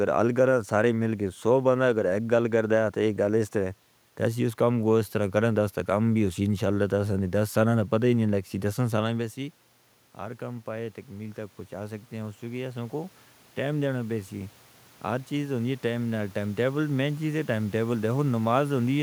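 From 10.17 to 18.1 s, automatic gain rising: after the talker moves away near 9 s, the gain control slowly adds about 10 dB, so voice and room noise swell together.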